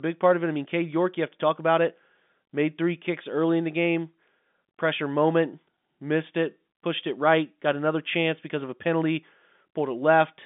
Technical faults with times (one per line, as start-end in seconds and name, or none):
none